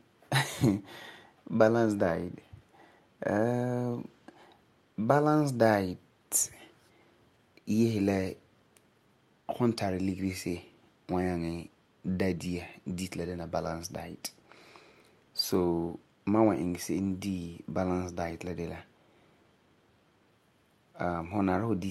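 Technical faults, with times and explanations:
No technical faults are audible anywhere in this speech recording.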